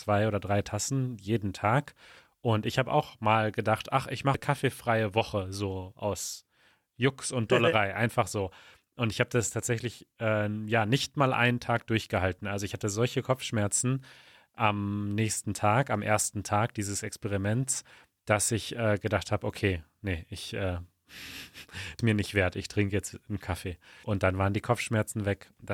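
A speech recording with three brief bursts of damaged data in the compressed stream, at 4.34 s just after "mal gedacht ach ich", at 21.99 s just before "mir nicht wert", and at 24.04 s. Each is a short glitch where the decoder misreads corrupted frames and hunts for the next valid header.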